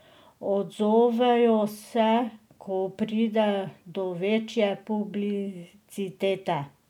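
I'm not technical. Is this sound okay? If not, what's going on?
Yes, nothing in this speech recording stood out as a problem when listening to it.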